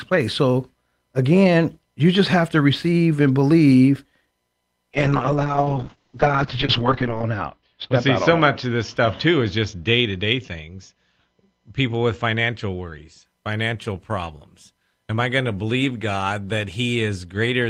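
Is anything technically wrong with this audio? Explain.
Yes, there's a call bitrate drop from 4.95 to 13.31 s, recovering just before "financial problems". The encoder got starved of bits, which fits a fall from about 32 to 7 kbps, so the speech goes rough and watery, and the top end collapses from 20 kHz to 8 kHz, sounding muffled for its worst 2.3 s.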